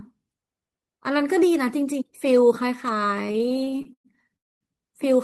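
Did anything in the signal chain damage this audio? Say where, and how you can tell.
Yes. Between 3.27 and 4.07 s there are repeated stalls (stutter), a network and jitter-buffer fault. Twelve short gaps, the longest 112 ms, fill about 291 ms, over a third of that span, with nothing lost. Packets arrived late, the buffer kept running dry, and the receiver stretched the last sound each time. On a waveform the speech looks chopped by repeated flat or smeared patches. A spectrogram shows vertical bands of frozen, fading harmonics.

From 4.36 to 4.64 s there is a call audio freeze. About 241 ms is inserted, almost entirely silence, and the audio then resumes where it stopped, 241 ms later than before, with nothing missing. The likely cause is a burst of packets held up in the network that emptied the jitter buffer outright. On a waveform it is a clean flat gap. On a spectrogram it is a blank vertical strip between speech segments.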